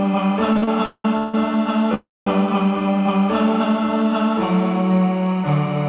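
From 0.53 to 1.35 s there are repeated stalls (stutter). Packets kept reaching the receiver late or more slowly than they were being played, so the jitter buffer ran dry five times in under a second. Each time, the receiver stretched the last sound to cover the wait, filling about 456 ms in total, with the longest gap at 190 ms. More than half of that stretch is concealment, so the sound drags and hiccups forward, though nothing is lost.

From 1.95 to 2.27 s comes a call audio freeze, likely caused by packets being held up in transit until the jitter buffer emptied. The receiver carried the last sound on as a fading buzz or hiss that falls to silence for about 210 ms, covering 319 ms in all. The audio then resumes where it stopped, pushed 319 ms later. All of this passes through a narrowband telephone codec with nothing above 4 kHz, which fits G.711 A-law at 64 kbps.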